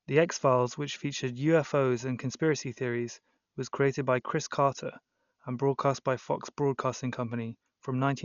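Throughout, likely Dolby Digital compression, starved of bits, removed everything above 6.9 kHz and filled bare bands with dither noise, leaving the speech heavily dull and rough.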